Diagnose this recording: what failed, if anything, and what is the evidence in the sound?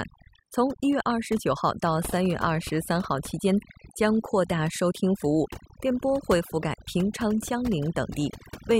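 Overdone noise removal in the call-processing stage affects the whole speech clip. The suppressor, set too hard, gates bands near its noise estimate, leaving near-silent gaps with twinkling specks. A spectrogram shows scattered isolated blobs and ragged, hollowed speech harmonics.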